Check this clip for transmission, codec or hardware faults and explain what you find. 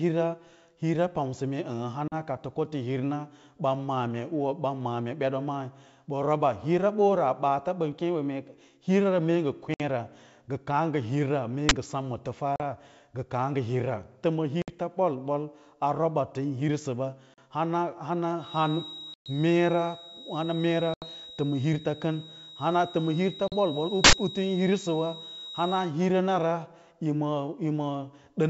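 Two kinds of fault occur in this speech, packet loss on the ADPCM call and an uninitialised buffer.

Packet loss on an ADPCM call hits eight times: 2.08 s (just after "hira pamsa mee"), 9.74, 12.56, 14.62 s (after "ta ma"), 17.34, 19.14, 20.94 and 23.48 s. Runs of packets vanish, leaving hard-edged silent gaps of 40 to 120 ms. The decoder's predictor and step size lose sync with the sender, so speech resumes slightly distorted before settling.

An uninitialised buffer is played at 11.69 s and again from 24.04 to 24.13 s. Blocks went out before audio was written into them, so stale memory was heard as samples. The result is a loud crack and a burst of digital noise, about 21 ms and 85 ms long, which fits 1024- and 4096-sample blocks.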